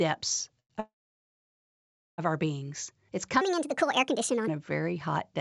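A short stall from a late packet at 0.60 to 0.72 s holds the last sound for about 100 ms with a faint buzz or dip while the jitter buffer waits, then resumes with nothing lost.

A call audio freeze follows from 0.80 to 2.20 s. The sound trails into a fading buzz or hiss and then about 1.3 s of silence before resuming at "our beings", likely because delayed packets emptied the jitter buffer.

A section at the wrong speed runs from 3.41 to 4.48 s, ending just before "a very hot". It plays 1.42 times too fast, so the sound is hurried and roughly seven semitones higher, likely from playback against the wrong clock. Throughout, the call path's G.722 coding cuts off the high frequencies.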